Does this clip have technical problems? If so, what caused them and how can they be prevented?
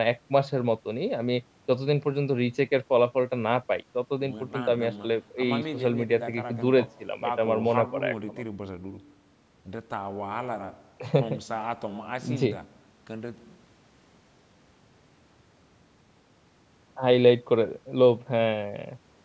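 No, nothing in this speech clip is a technical problem; it has simply gone through a call's microphone processing, which trims the lowest bass and leaves nothing above 8 kHz, and that's just how call audio sounds, so there's nothing to prevent.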